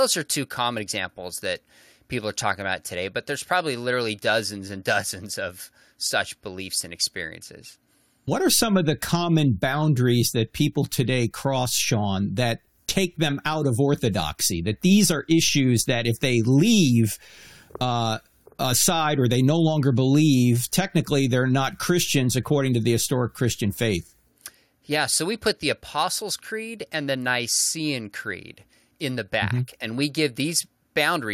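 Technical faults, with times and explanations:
Listening through this speech recording, nothing stood out as a technical fault at any point.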